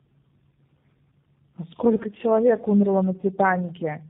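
From start to finish this speech carries tandem speech coding. It sounds like two low-bitrate speech coders back to back, fitting something like G.723.1 handing over to G.729A, with a plain G.711-style leg between them that adds little. The second coder is working on sound the first has already mangled, so the errors pile up: rough, warbly, muffled, and nothing above 3.8 kHz.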